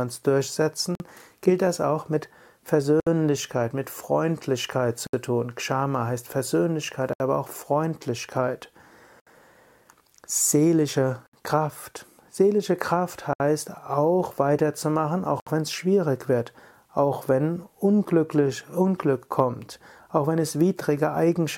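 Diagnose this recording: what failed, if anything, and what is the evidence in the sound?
The failure is at the codec stage: a gap at a join of encoded pieces. Silences open at 0.95, 3.0, 5.07, 7.13, 9.2, 11.27, 13.33 and 15.4 s. The first lasts about 49 ms, the rest about 67 ms each. Each is spaced about 2 s of audio after the last. The sound drops out with smeared edges, then resumes where it left off. Separately encoded segments were joined untrimmed, so encoder delay and end-frame padding remain as silence.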